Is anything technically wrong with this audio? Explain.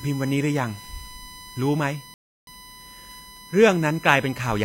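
Yes, there are two faults in this speech clip.

USB whine runs through the whole recording as a steady tone fixed at 1 kHz, sitting roughly 20 dB below the speech. A USB bus pulls current in regular 1 ms frames, and that periodic draw leaks into the audio path through shared power or ground. The 1 kHz repetition rate becomes an audible pitch that never moves, heard as a thin, constant whine under the voice.

A rebuffering stall occurs from 2.14 s to 2.47 s. The player exhausted the audio it had downloaded and halted until more data arrived. The speech drops abruptly to silence for about 0.33 s, then picks up exactly where it left off. No speech is lost, but the pause stretches the timeline and breaks the natural rhythm of the delivery.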